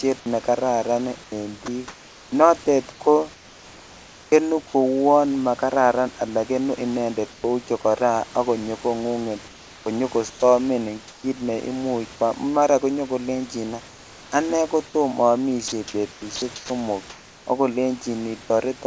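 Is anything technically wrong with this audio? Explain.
Yes. The speech is repeatedly interrupted or replaced by synthetic noise, in a pattern that points to a voice detector gating the sender. Beneath it sits steady room noise about 24 dB below the speech, and nothing above 8 kHz reaches the listener, as expected from the call codec.

Sound chopped by the voice detector appears from 1.24 to 2.32 s and again from 15.68 to 16.70 s. Over these stretches the speech stutters, and its quieter edges keep vanishing into a flat hiss. The likely cause is the detector switching on and off several times, with comfort noise filling about 540 ms of the first stretch and about 340 ms of the second.

Comfort noise in place of the background occurs five times: 2.92 to 4.32 s, ending just before "kouon makararan alaa kenuu"; 7.32 to 7.44 s, between "makararan alaa kenuu inendet" and "chokora ak konyo kong'unget"; 9.48 to 10.42 s, following "chokora ak konyo kong'unget"; 11.08 to 11.24 s; and 13.88 to 14.32 s. 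In each pause the textured room sound gives way to an even, featureless noise, about 4 dB quieter at 7.32 s, about 1 dB at 11.08 s and about 3 dB at 13.88 s. This is likely discontinuous transmission, where the receiver synthesises noise while the sender stays silent.

Sound dropped by the voice detector occurs from 10.30 to 10.42 s. About 50 ms of sound disappears and is replaced by 120 ms of steady noise before the real sound returns. The likely cause is the detector judging that quiet sound to be background and halting transmission too early.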